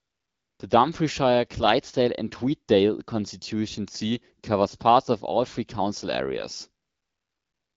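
From 0 to 0.59 s and again from 6.85 s to the end at 7.76 s, the background turns into a smooth, steady hiss that switches in abruptly. This is AMR comfort noise: with no speech detected, frames stopped, and the receiver synthesised substitute noise.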